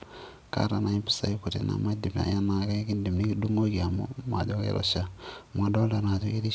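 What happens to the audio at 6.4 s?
Nothing goes wrong at 6.4 s: the speech carries on intact, with no dropout, glitch or distortion, only the 8 kHz upper limit of the G.722 call path.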